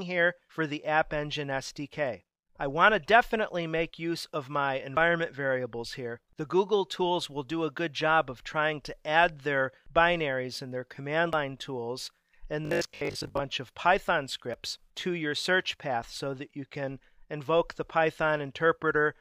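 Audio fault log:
4.18 s, 4.97 s, 11.33 s, 14.54 s, dropped buffer (overrun): each time the sound jumps forward with no gap of silence. At 4.18 s and 14.54 s the skip is short, around 20 ms. At 4.97 s and 11.33 s it is longer, around 70 ms. The likely cause is the software falling behind the hardware, so incoming samples were overwritten before they were read and the surrounding audio was joined directly.
12.65–13.39 s, robotic sound from repeated short buffers: the sound becomes a rigid, metallic buzz at 50 Hz that still loosely follows the original contour. The likely cause is new audio arriving too slowly, so the playback filled the time by looping the last 20 ms block over and over. That repetition period produces the fixed 50 Hz pitch, and most of the real audio in this stretch is skipped.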